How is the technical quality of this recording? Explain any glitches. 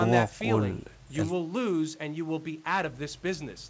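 Nothing in this speech recording stood out as a problem on listening.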